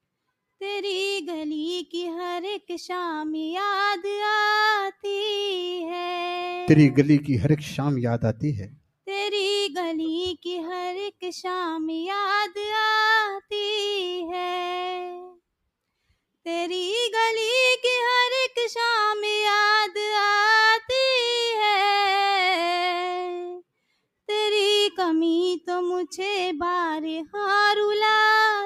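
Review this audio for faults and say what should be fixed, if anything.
There's one spot of sound cut by the noise suppressor, from 15.23 to 15.41 s. The suppressor mistook part of the sound for noise and pulled it down by about 16 dB at the deepest, so it sags for roughly a fifth of a second. Easing the suppression strength or raising its threshold should keep it from grabbing wanted sound like that.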